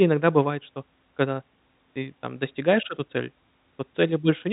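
No technical fault can be heard in the speech recording, which carries the narrow band of G.711 telephone coding, with nothing above 3.8 kHz.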